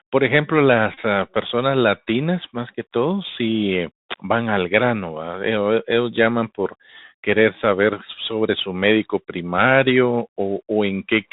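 Throughout the speech, the Bluetooth CVSD headset codec is plainly audible. The band stops at 4 kHz, s sounds come out scratchy, and a granular hiss sits underneath, consistent with a 64 kbps one-bit delta coder whose adaptive step cannot keep up with fast, loud high-frequency content.

From 0.94 to 0.99 s, a Bluetooth headset packet repeated run produces a short steady buzz near 267 Hz, as roughly 26 ms of lost audio is filled by replaying the last good packet every 3.75 ms. A shorter repeated-packet buzz follows from 2.74 to 2.77 s, covering about 11 ms of lost audio.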